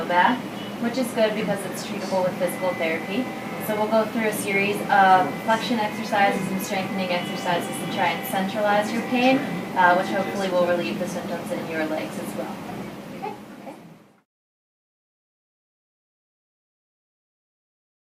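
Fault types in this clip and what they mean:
Nothing wrong turns up here: the audio runs along steadily with no glitches, dropouts or odd artefacts to point to.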